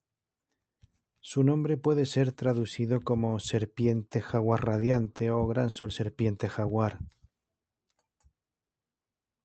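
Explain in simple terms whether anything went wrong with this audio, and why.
Repeated packet loss (robotic sound) from 4.51 to 5.85 s: eight short gaps were patched by repeating the last sound, leaving it choppy and robotic.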